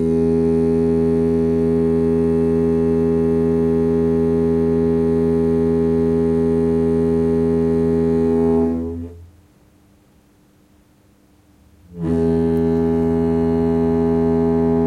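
No technical faults are audible anywhere in these sounds.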